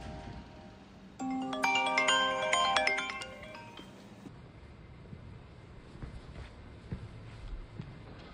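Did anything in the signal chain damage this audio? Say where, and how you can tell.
Yes. From 4.28 s to the end at 8.34 s, the audio is a section at the wrong speed. It plays at about 0.55 times its recorded rate. Everything drops roughly ten semitones and drags. The change is abrupt, with no gradual slide. Speed and pitch fall together, which points to the playback or editing stage. The likely cause is a clock mismatch: that section was read out at a slower rate than it was captured at.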